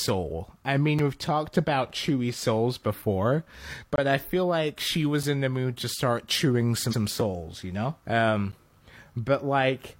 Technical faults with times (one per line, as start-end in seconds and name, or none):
0.99 block of digital silence
1.90 block of digital silence
3.96-3.98 block of digital silence
5.23 block of digital silence
6.88-6.97 repeated frames
7.21 block of digital silence
8.52 block of digital silence